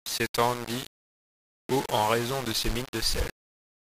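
From start to finish the speech carries a coarse, grainy distortion that rises and falls with the voice, with the quieter passages turning gritty and the softest tails breaking into sputter or cutting out. The likely cause is low bit depth without dither: the audio appears to have been rounded to only around 4 bits, so the quantisation error tracks the signal and sits only roughly 10 dB beneath it instead of forming a steady noise floor.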